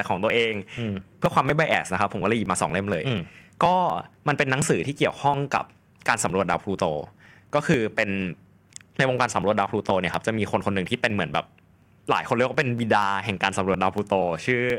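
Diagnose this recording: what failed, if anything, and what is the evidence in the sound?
Periodic USB or driver dropouts: regular ticks every 0.24 s from 0.30 to 14.70 s, each skipping roughly 10 ms; evenly spaced, unlike random clicks.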